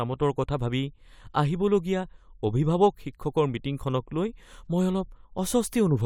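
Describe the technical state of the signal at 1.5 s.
At 1.5 s the speech signal is intact, with no dropout, distortion or other fault.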